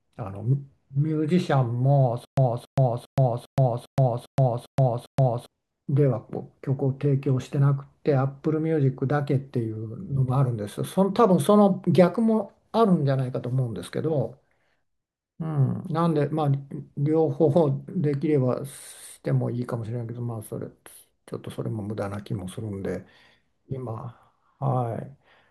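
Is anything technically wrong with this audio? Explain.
Yes. Stutter with silent gaps from 2.25 to 5.46 s: a 277 ms fragment repeats eight times, separated by 124 ms of digital silence, likely from a stalled stream replaying its last buffer.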